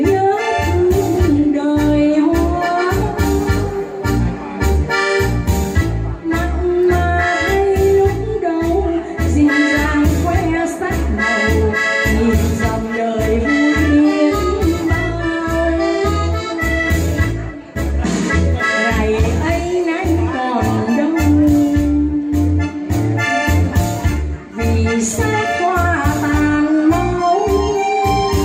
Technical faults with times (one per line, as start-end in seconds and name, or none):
none